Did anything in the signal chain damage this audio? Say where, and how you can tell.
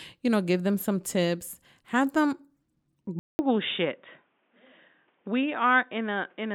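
Yes. At 3.19 s the speech cuts out for 200 ms and returns dull and boxy, with nothing above 3.7 kHz, roughly 5 dB quieter, and a new noise floor about 45 dB below the signal. It stays that way to the end. The stage is capture: the input was likely switched to a poorer device, such as another microphone or a headset's call profile, whose narrower band, different gain and own noise replaced the original path.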